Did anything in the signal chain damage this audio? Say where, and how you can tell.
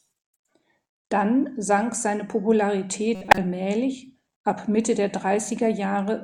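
Yes. The damage is at the codec stage, where a corrupt frame was decoded. From 3.15 to 3.38 s the speech breaks into a burst of misplaced energy that peaks around -5 dBFS. It lasts about 0.23 s, which fits a short run of several consecutive compressed frames. Flipped bits in those frames gave the decoder wrong gains and misread codes. It played them anyway, so energy landed at the wrong frequencies.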